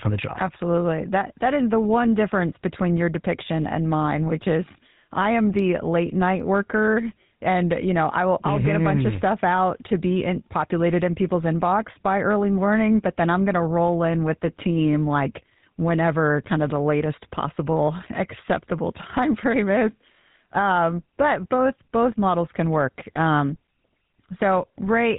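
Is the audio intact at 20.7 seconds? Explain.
No. At 20.7 seconds the speech carries the GSM full-rate codec damage that runs through the whole clip. This codec models the vocal tract and drives it with a regular pulse train that keeps only every third excitation sample, so the voice turns buzzy and gravelly, with nothing above 4 kHz, which fits the 13 kbps GSM full-rate codec. A plain 4 kHz low-pass would only dull the sound. Here the roughness itself is plainly audible.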